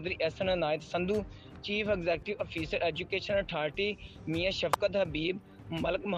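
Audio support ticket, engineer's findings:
Sharp snap at 4.74 s, peaking around -10 dBFS, sitting on top of the sound. Electrical switching spike, likely a nearby switch arc. Underlying audio continues uninterrupted, unlike a dropout click.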